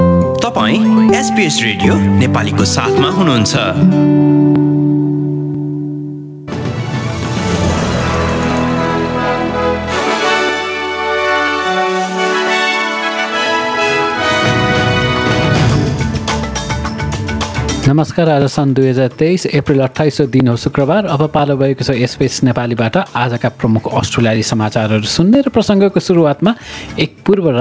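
From the start, the level swings by about 20 dB, leaving everything squashed. This is gain pumping, likely from gain set far too high with a fast limiter clamping down.

From 0.6 s to 27.3 s, a regular tick lands roughly once a second, every 0.99 s, about thirty in all, heard only over signal. These are periodic USB or driver dropouts: around 10 ms of audio is skipped each time a background task stalls the bus or driver. Nothing sounds above 8 kHz, consistent with the G.722 call path.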